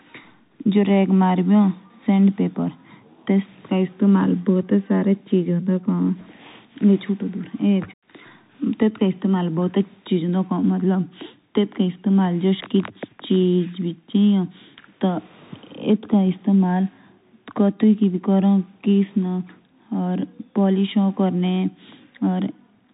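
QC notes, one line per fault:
Throughout: Bluetooth CVSD headset codec. Speech is band-limited with nothing above 3.8 kHz, which fits a 64 kbps one-bit delta stream. The adaptive step lags loud high-frequency energy, so s sounds turn scratchy and a granular hiss sits under the speech, plainly audible.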